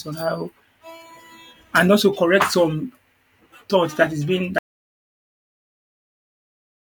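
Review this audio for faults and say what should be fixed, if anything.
At 4.58 s the speech cuts off mid-flow and the rest of the recording, through to its end, is silence: an audio dropout to silence. The input was likely lost, through a disconnected device, failed link or accidental mute, while recording continued writing silence. Unlike a noise gate or a fade, there is no tail, no gradual decay and no residual room tone. The level falls straight to nothing, and whatever followed is unrecoverable. Monitor input levels live and secure cables and links, so a lost signal is caught before recording continues.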